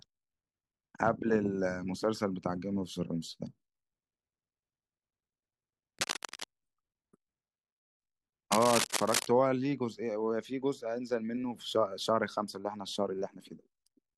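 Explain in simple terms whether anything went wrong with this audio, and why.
Two bursts of cable scratch noise interrupt the speech, from 5.99 to 6.45 s and from 8.52 to 9.26 s. Each sounds like a rough scratching or crackling laid over the recording. The second burst is louder, roughly as loud as the speech itself. The likely cause is a worn cable or plug being moved. Its electrical contact then flickers between good and poor, and that rapid flickering comes through as noise.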